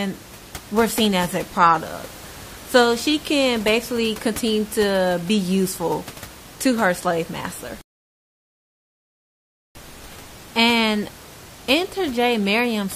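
Speech with low room noise, about 19 dB under the voice, runs normally until 7.81 s, when the audio drops to dead silence for about 1.94 s and then resumes at 9.75 s exactly where it left off. This is a rebuffering stall: the player exhausted its downloaded audio and waited for more, adding time without losing any sound.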